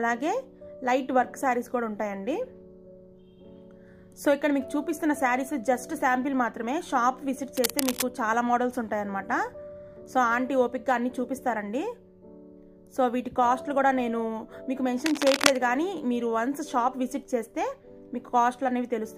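At 7.57 to 8.03 s, cable scratch noise cuts in, about 5 dB below the sound. It returns at 15.06 to 15.59 s, roughly as loud as the sound. Both are dense, ragged scratching bursts. A worn cable or connector being moved is the likely cause.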